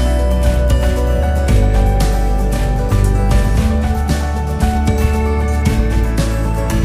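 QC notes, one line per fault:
No faults found in this clip. Nothing calls for a timed entry.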